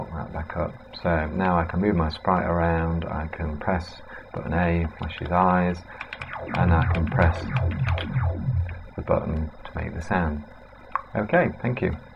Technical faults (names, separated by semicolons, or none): none